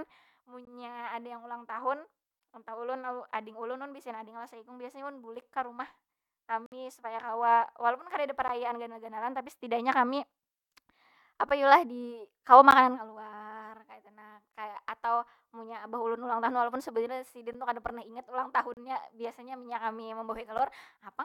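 At 0.65 s the speech hits a gap between stream segments: a hard-edged hole of about 19 ms where two segments' timestamps don't quite meet and the player pads the space with silence. The same thing recurs on a 6 s rhythm at 6.66 to 6.72 s (about 57 ms, the longest), at 12.71 s (about 14 ms), and at 18.74 to 18.77 s (about 31 ms), right after "kada pernah ingat ulang". Nothing's missing, the sound just stops briefly and resumes.

Interleaved with those is a gap between chunks, a steady 13 ms silence at each 3 s chunk join: 5.41, 8.48, 11.49 (just before "yu lah"), 14.52, 17.53 (between "walaupun sebujurnya sidin" and "tu kada pernah ingat") and 20.58 s. That fixed length at regular spacing fits padding or a late start at every chunk boundary. Again no sound is lost, but each join produces a short, sharp dropout in the speech.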